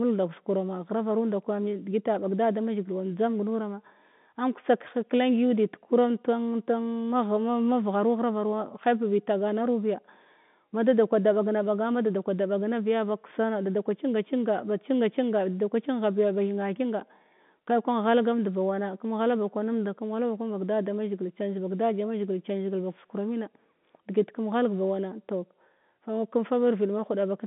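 The speech carries no technical faults: it sits in an ordinary G.711 telephone channel whose line band runs from about 150 Hz to 3.6 kHz, with nothing present above 3.8 kHz, exactly as a 64 kbps mu-law telephone path would deliver it.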